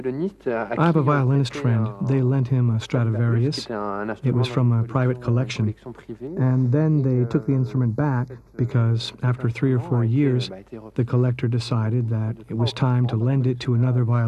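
From 6.27 to 8.71 s, channel delay causes comb filtering: one channel lags the other by a fraction of a millisecond, and the mono sum cancels evenly spaced bands from around 3 kHz up. The sound turns hollow, and unlike flanging, the notches stay fixed.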